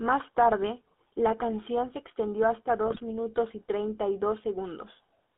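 A speech recording carried over a mobile voice channel using the GSM full-rate codec, at a rate that fits 13 kbps. That coder keeps only a coarse vocal-tract filter and a sparse train of regular excitation pulses, so fine detail is thrown away. Throughout, the sound is plainly buzzy and gravelly, and the line band sits at roughly 250 Hz to 3.4 kHz, giving a thin, boxed-in tone with nothing above. From 2.86 to 3.01 s come GSM bit errors, which fit a damaged radio link running around 1.5% errors across about seven frames. Corrupted filter, pitch and gain parameters reach the decoder, so for that short stretch the spectrum warps and the level lurches from frame to frame. The voice breaks up into squawks, pops and gargling before the coded sound resumes.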